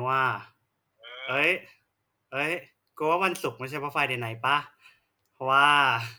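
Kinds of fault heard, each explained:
Clock slip clicks: a fast, soft rattle of tiny ticks runs through the speech from about 0.1 s almost to the end, one single-sample jump roughly every 20 ms, likely from two unsynchronised clocks about 1000 ppm apart. Unlike random crackle, the ticks keep an even rhythm.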